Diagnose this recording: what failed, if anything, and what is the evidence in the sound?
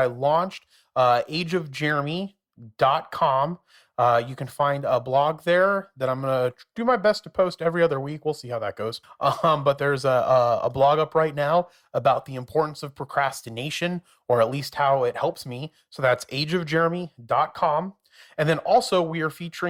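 No fault is audible here.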